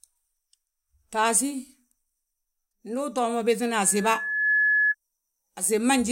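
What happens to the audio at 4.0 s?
A loudspeaker feedback squeal is under way, running from 3.83 s to 4.95 s. The microphone picks up its own loudspeaker, and the loop gain exceeds one at 1.7 kHz. That single tone swells within a second, peaking about 5 dB above the speech.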